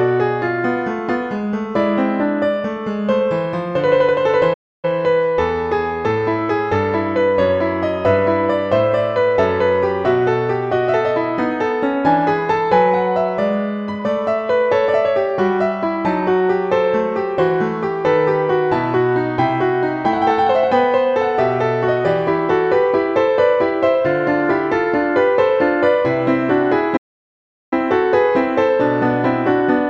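The audio has two playback stalls, likely from the player running short of data or its thread being blocked: the sound cuts to silence at 4.53 s for about 0.30 s and at 26.96 s for about 0.75 s.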